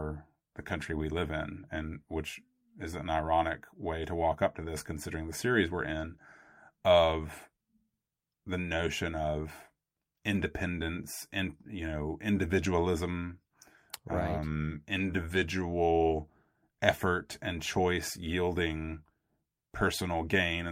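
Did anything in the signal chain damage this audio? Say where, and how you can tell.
No, nothing damaged this audio.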